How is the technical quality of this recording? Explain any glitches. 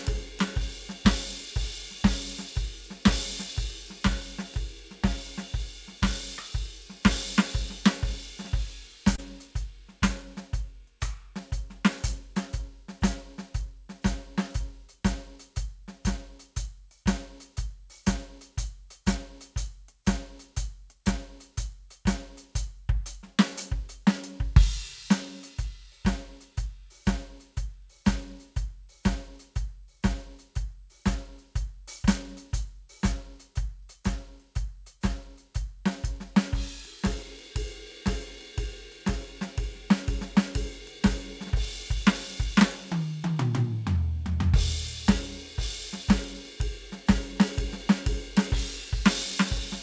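The music comes through a call path, and its top end stops at 8 kHz, which fits a wideband call codec such as G.722 at 64 kbps. There's one glitch worth pointing out.

Around 9.16 to 9.20 s there's a short concealed packet loss. About 20 ms of audio didn't reach the decoder in time, so the receiver covered the gap by extending the sound it had just played and then blended back into the real signal. You hear it as a tiny smear or wobble in the music, over in a blink.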